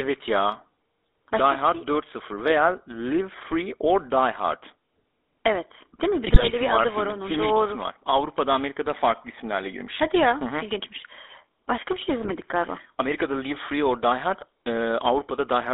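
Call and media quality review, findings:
GSM full-rate codec throughout: buzzy, gravelly speech, band limited to 300 Hz to 3.6 kHz. Pulse-excited vocal-tract model fits 13 kbps GSM full rate; coarse excitation causes roughness.

GSM bit errors at 6.28–6.54 s and 12.24–12.31 s, right after "bir şey": squawks, pops, gargling. Corrupted filter, pitch or gain parameters distorting decoded frames.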